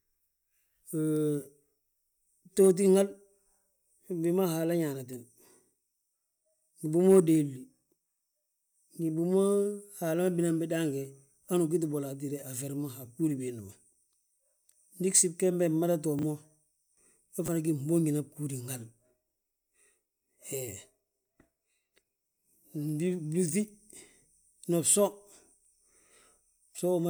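Chunks out of order at 16.19 to 16.23 s and 17.46 to 17.48 s, just before "fana gí": a 10 ms chunk of the speech plays three chunks late, then one chunk late. Hard joins at the displaced chunk produce brief jumbled moments.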